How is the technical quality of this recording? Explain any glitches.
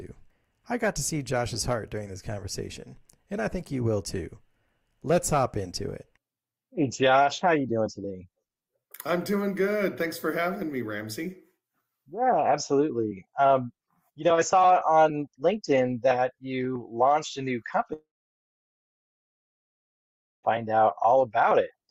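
There is one clear glitch. A long network dropout runs from 17.93 to 20.45 s: the incoming audio likely stopped arriving, so the last sound fades briefly into about 2.4 s of silence, then resumes with 2.5 s lost.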